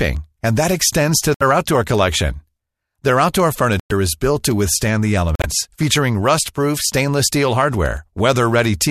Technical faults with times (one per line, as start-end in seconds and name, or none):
0.17-8.86 word clock ticks
1.34-1.42 corrupt frame muted
3.80-3.92 corrupt frame muted
5.35-5.46 corrupt frame muted